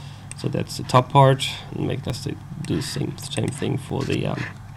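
There are slight forward jumps in the sound at 1.12, 2.10 and 3.9 s. That's likely a dropped buffer (overrun): a few milliseconds got overwritten before being read, so the audio on either side is spliced straight together.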